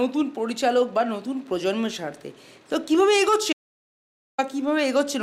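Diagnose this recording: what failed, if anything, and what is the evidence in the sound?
The signal reaching the recorder was lost for a short stretch, most likely a momentary disconnect or mute somewhere in the input path, while the recording chain kept writing silence. The result is an audio dropout to silence from 3.53 s to 4.38 s: the sound stops abruptly mid-flow and resumes just as abruptly, with about 0.86 s of dead-flat silence between, no room tone or noise floor, and that portion of the material simply gone.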